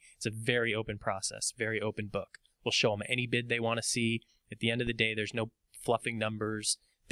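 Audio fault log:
4.87–4.93 s, phantom power thump: a deep, dull thud lasting about 58 ms, peaking at about -28 dBFS and dying away over roughly 13 ms. This is the sound of phantom power or another supply being switched on or off on a live input. The sudden DC step charges the coupling capacitors and reaches the converter as a low-frequency pulse. At this modest level the pulse is heard as a soft knock rather than a clipped bang.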